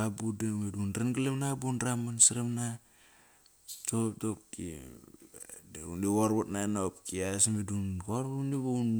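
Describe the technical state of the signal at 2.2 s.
At 2.23 s there's a single sharp click in the speech, and it sounds like dropped samples. Likely just a handful went missing, well under a millisecond's worth, so the waveform jumps straight from one value to a later one. That gap is far too short to take any actual sound out. All you get is that one abrupt step, heard as a tick and showing up as a thin vertical line across the spectrum.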